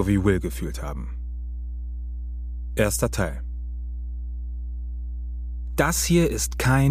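From start to finish, mains hum sits under the sound as a steady 60 Hz tone, fairly prominent at roughly 10 dB below the programme level. Power-line current is leaking into the signal path, most plausibly through a ground loop or a nearby transformer.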